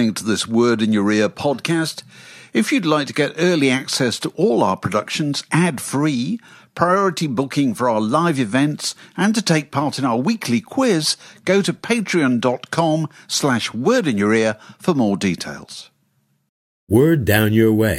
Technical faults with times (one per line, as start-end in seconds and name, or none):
none